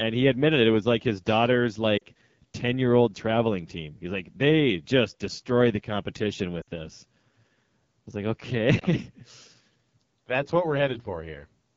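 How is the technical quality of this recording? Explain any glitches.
The speech carries a plainly audible codec roughness throughout, and it drops out briefly three times.

The AMR wideband (HD Voice) codec damage is present for the whole clip. The voice sounds raspy and grainy, with a hissy top band, which fits one of AMR-WB's low modes, around 8.85 kbit/s. At that rate the pulse-driven vocal tract model has too few bits to place its excitation pulses accurately. The band above 6.4 kHz is also filled with shaped noise rather than real detail. Unlike a lossy music codec, it adds no swirly pre-echo. The result is a steady buzzy coarseness that follows the voice itself.

Lost AMR speech frames occur at 1.98 to 2.03 s, right after "was like his daughter's" and before "ten year old traveling", and again at 6.61 to 6.68 s, just after "just destroy the competition". A third, shorter loss comes at 8.79 s. 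In each case the decoder repeated its last good pitch and vocal tract settings at falling gain. Each gap lasts roughly 20 to 60 ms and is heard as a smeared warble that dips toward silence, not a hard click. The voice then resumes weak or rough for a moment.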